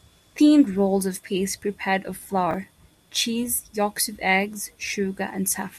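A brief jumbled stutter at 2.51 to 2.54 s comes from chunks out of order. One 10 ms chunk arrived two chunks late and played after the two that should follow it. Nothing is lost, but the reordering leaves three hard joins.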